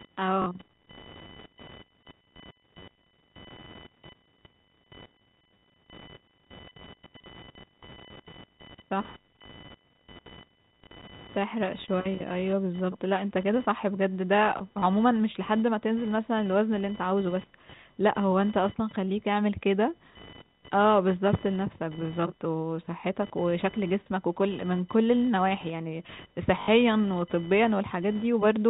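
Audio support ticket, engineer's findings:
Computer activity noise: a buzz around 1 kHz, about 20 dB below the speech, throughout. It follows machine load via shared ground, not speech level, unlike G.711 quantisation hiss.

Packet loss with last packet repeated: robotic stutters at 0.42–0.46 s and 26.62–26.68 s, small blips at 10.84–10.86 s and 14.80–14.82 s. The receiver replays the previous packet rather than leaving silent gaps. Lengths fit 20 ms packets.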